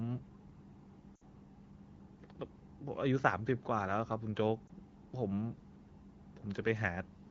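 This is speech carried over what sounds like AMR wideband (HD Voice) coding, and it has two bursts of lost AMR speech frames. From 1.16 to 1.23 s, a 60 ms gap fits a run of three lost frames. The decoder repeats the last good pitch and vocal tract settings while lowering the gain, so the sound drops to near silence within two frames. From 4.67 to 4.70 s, a 20 ms loss fits one frame and gives a short dip or warble.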